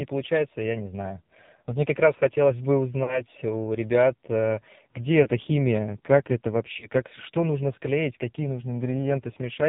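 The whole recording runs through the AMR narrowband mobile codec. There's nothing above 4 kHz, and the speech comes across buzzy and synthetic, heavily squeezed in a way that fits a low bitrate of around 5.9 kbps, where the vocal-tract model has very few pulses to work with.

Then there are lost AMR speech frames. At 3.04 to 3.24 s, right after "как раз хотелось бы", about 40 ms of audio went missing. The decoder smeared the last good pitch into a fading warble before "у ребят э где" picks up rough. Shorter dips of about 20 ms follow at 5.24 to 5.29 s, just before "химия как это", and at 6.80 to 6.88 s, before "как что нужно склеить".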